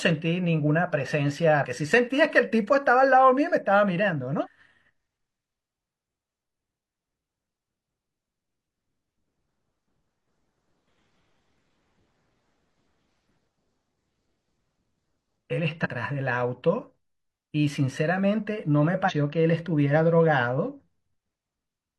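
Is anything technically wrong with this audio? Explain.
Yes. Damaged data in a compressed stream produces brief blips in the speech at 1.60–1.66, 4.42–4.47, 12.52–12.56, 15.81–15.87 and 19.05–19.12 s. Corrupted frames are misdecoded until the decoder resynchronises.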